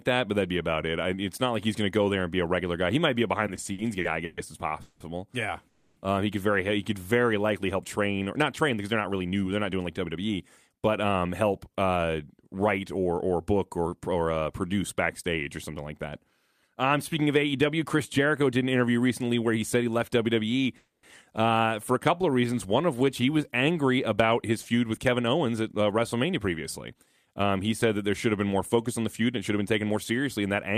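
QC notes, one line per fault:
3.47–5.01 s, repeated stalls (stutter): nine short gaps, the longest 180 ms, together about 460 ms of held-over sound, around 30% of the span. Packets kept arriving late, so the jitter buffer drained over and over. Each time the receiver stretched the last sound until audio resumed. Nothing is lost, but the speech drags and stutters.
5.68–5.97 s and 20.77–21.04 s, call audio freeze: the last sound is held as a fading buzz for 280 ms, then 260 ms, the second ending in about 10 ms of silence. Speech picks up at "uh he could very" and at "uh for a". The likely cause is packets held up in transit, emptying the buffer. A gap is inserted, so the delay grows by the same amount, and nothing is missing.
8.13–10.88 s, 16.05–18.19 s, 25.45–27.49 s and 28.76–29.97 s, jitter buffer speed-up: the audio runs 8%, 4%, 8% and 8% fast at unchanged pitch, the last starting after "should have been more". 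The buffer held more than its target. The receiver trimmed pitch-period pieces many times in a row, removing roughly a fifth, a tenth, 0.15 and a tenth of a second. Speech sounds hurried in the 8% runs.
22.17–23.39 s, jitter buffer slow-down: the audio runs at 89% speed, same pitch, with 145 ms added. The buffer was low, so the receiver repeated single pitch periods and bits of pauses to rebuild a reserve. Sounds are drawn out.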